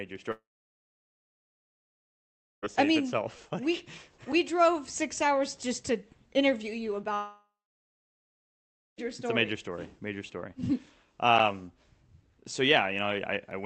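Two long network dropouts, likely from packets lost on the way, break the audio from 0.31 to 2.64 s and from 7.14 to 8.99 s. Each begins with a brief fading concealment buzz, then sits silent for about 2.2 s and 1.5 s before resuming with the missing stretch skipped, all over an Opus call path that cuts off above 8 kHz. At 11.38 s a 10 ms block of digital silence is different: there is no fade, just an abrupt cut out and back that is heard as a tick.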